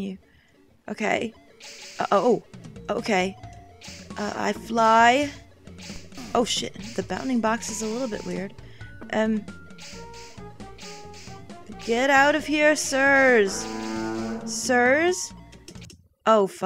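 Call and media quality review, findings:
No call or media quality faults found.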